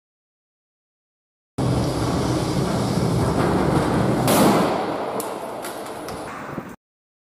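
At 6.28 s the audio jumps into a section at the wrong speed that runs to the end at 7.33 s. Playback there is about 1.76 times too fast, so timing and pitch shift together. Everything sounds abruptly hurried and raised by roughly ten semitones, giving a thin, chipmunk-like character against the preceding material. The likely cause is that this last segment was rendered or resampled against a mismatched clock, so its samples play out faster than they were captured.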